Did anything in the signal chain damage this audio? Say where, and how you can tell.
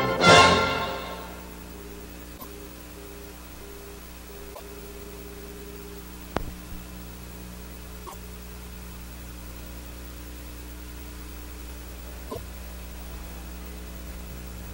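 Yes, at the codec stage. At 2.37 s, 4.53 s, 8.06 s and 12.29 s the sound jumps ahead and the next 80 ms or so comes out mangled, about three 26.1 ms MP3 frames each time. The likely culprit is a broken MP3 bit reservoir. Frames were dropped, so the frames after each cut reached back for borrowed data and decoded someone else's bytes until the reservoir caught up again.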